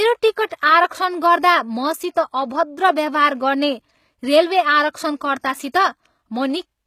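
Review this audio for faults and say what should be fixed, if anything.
Plainly audible codec damage runs through the whole speech clip. The treble sounds rebuilt, not captured, and s sounds turn gritty and metallic. Nothing reaches above 15 kHz. The likely cause is HE-AAC compression, whose copied upper bands miss the original harmonics. The damage fits a bitrate near 20 kbps. Encoding at a higher bitrate, or losslessly, would prevent it.

Pre-echo appears at 0.49 s. A brief hiss of about 20 ms comes just before an attack, and the onset sounds soft and smeared. The codec spread the noise for the loud part of its block into the quiet moment ahead of it. A higher bitrate, with shorter transform blocks on sharp transients, would prevent it.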